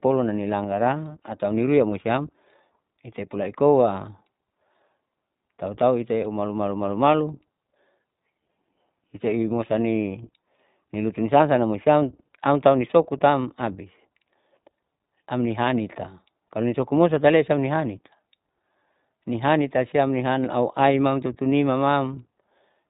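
Across the whole recording the speech carries the sound of the iLBC codec, and the damage is plainly audible. Everything above 4 kHz is missing, so sibilants lose their edge and the voice sounds boxed-in and narrowband. Each short frame's excitation is coded on its own, leaving a slightly rough, synthetic grain on voiced sounds. The texture fits iLBC's 20 ms frame mode at about 15.2 kbps.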